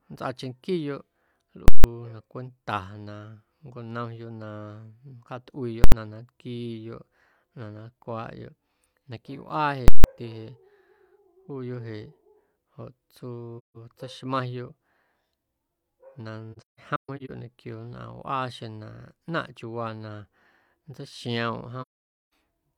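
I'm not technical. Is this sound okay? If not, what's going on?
No. Three times, invalid numbers at full scale occur: a calculation broke, pinning the output at maximum loudness. At 1.68 to 1.84 s, 5.84 to 5.92 s and 9.88 to 10.04 s you hear a loud bang or pop pair around a silent gap.

Later, AAC frame loss with muting occurs: pieces of compressed data went missing, so the speech fades briefly into silence, at 13.58 to 13.77 s, in several short dropouts between 16.52 and 17.31 s, and at 21.81 to 22.31 s.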